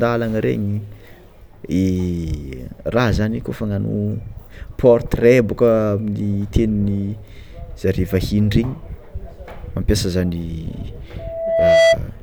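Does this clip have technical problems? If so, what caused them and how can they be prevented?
Yes. From 11.19 to 11.98 s a 663 Hz tone swells over roughly 0.7 s into a loudspeaker feedback squeal about 10 dB above the speech, as the microphone re-amplifies its own loudspeaker output. Keeping the microphone away from and behind the loudspeakers, lowering gain, or notching 663 Hz prevents it.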